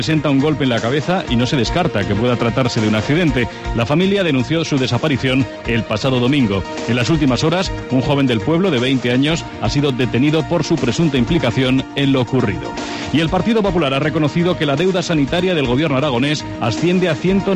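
Hard clipping runs through the whole clip. The signal is driven about 5 dB past what some stage in the chain can pass, so its peaks are sliced flat at a fixed ceiling. Only a small share of the waveform, around two percent, actually hits that limit, so the damage is a brittle crackle on the loudest moments rather than constant fuzz. The abrupt corners add bright high harmonics, unlike the rounder, gradual thickening that soft saturation gives.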